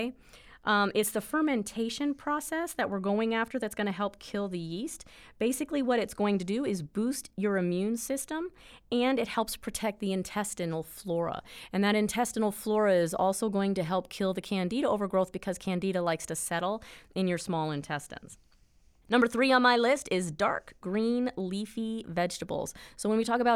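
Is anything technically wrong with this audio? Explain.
No, the recording shows no technical fault that a listener can hear anywhere in the signal.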